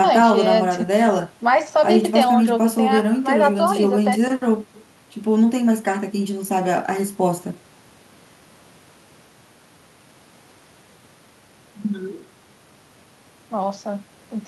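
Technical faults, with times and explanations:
No technical faults are heard in this speech clip.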